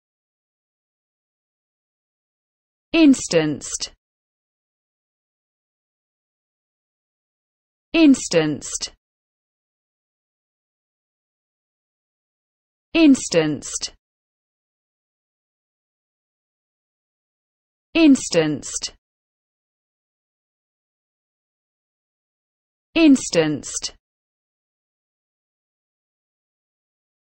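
At 3.16 to 3.2 s there are chunks out of order: one 20 ms chunk arrives a single slot late, so two neighbouring pieces swap places. Nothing is missing, but the sound briefly jumbles. The waveform shows three abrupt steps at the joins, and the spectrogram shows thin vertical broadband lines.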